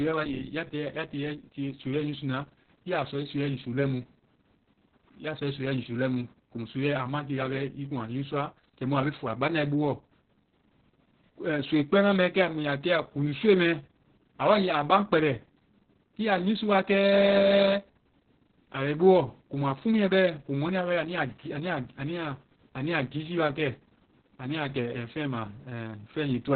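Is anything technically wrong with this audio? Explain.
Yes. Opus voice compression runs the whole way through. The speech has been squeezed into narrowband SILK coding, with nothing above 4.5 kHz, and the excitation is coded so coarsely that voices come out muffled, hoarse and a bit robotic, which fits a bitrate around 6 kbps.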